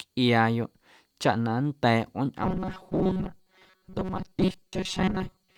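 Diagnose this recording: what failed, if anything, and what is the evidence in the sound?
From 2.43 s to the end of the clip, the speech turns into robotic sound from repeated short buffers: a rigid metallic buzz near 188 Hz that still loosely tracks the syllables. The likely cause is in the driver or buffer stage, where audio arrives too seldom and a chunk of about 5.3 ms is replayed in place of most of the missing signal. A spectrogram would show flat, evenly spaced harmonics at multiples of 188 Hz, and the waveform would show identical cycles repeating every 5.3 ms.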